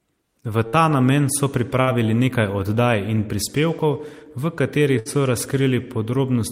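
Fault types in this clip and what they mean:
burst of packet loss: a run of late or lost packets leaves about 60 ms of speech missing each time, at 0.67 s before "ta namen so", 1.81 s and 4.99 s. The receiver stretches the last sound into a short fading buzz or hiss of roughly 55 to 63 ms. That concealed tail before the jump, rather than a bare dropout or click, is what separates it from a simple cut.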